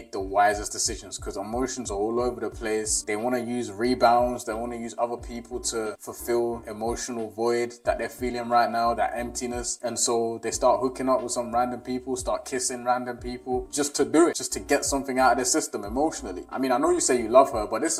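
The whole thing sounds hollow and phasey, classic channel delay (comb filtering). One side lags the other by around 3 ms, so when they're folded to mono, shared content cancels in fixed notches starting near 150 Hz and repeating up the spectrum, all the way through.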